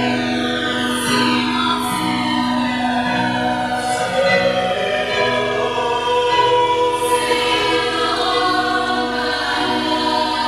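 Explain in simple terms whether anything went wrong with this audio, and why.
Something did go wrong. The two channels are drifting apart for the whole clip. They were likely recorded on devices whose clocks ran slightly differently. One side slowly falls behind, ending about 3 ms late. Played together, this gives a slow, swirling flanging sound.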